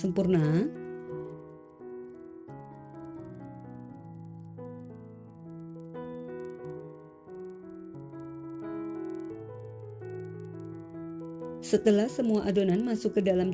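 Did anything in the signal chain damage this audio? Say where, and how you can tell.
Yes. The 48 kHz to 16 kHz sample-rate conversion is broken: the resampler restarted on every block, treating each 50 ms block as if nothing came before or after it. Each block edge therefore gets a small interpolation error, heard throughout the clip as a steady tick at 20 Hz, one per block boundary. It follows the sound's level, riding on the signal and dropping away in the gaps, which points to the converter rather than the source.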